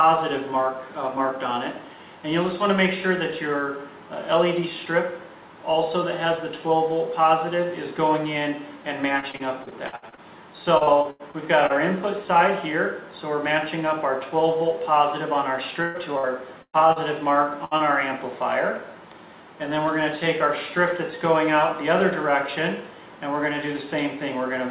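From 9.2 to 11.72 s and again from 15.82 to 16.99 s there is repeated packet loss, producing a robotic, choppy texture. Fifteen gaps in the first stretch and five in the second, the longest about 89 ms and 118 ms, were each patched by extending the previous sound, so roughly a fifth to a quarter of each span is synthetic fill.

At 17.65 to 17.74 s a burst of packet loss drops about 60 ms of audio. The receiver holds and fades the last sound across the hole, heard as a brief sustained buzz or decaying hiss, and playback then resumes with that segment missing.

Immediately after, at 17.77 to 17.83 s, a short concealed packet loss covers about 30 ms. The hole is filled by continuing the preceding sound and crossfading back, giving a quick smear or wobble. The whole clip carries the band limit of the call path, with nothing above 4 kHz, consistent with G.711 A-law at 64 kbps.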